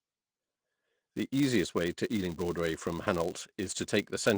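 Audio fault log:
throughout: filter restarted on every block. A filter in the chain loses its state at each block boundary and restarts from silence, so every block opens with a small transient. These stack into a steady buzz at 200 Hz, which fits 5 ms blocks, and it rises and falls with the speech level. The Opus voice compression underneath is light and runs fullband.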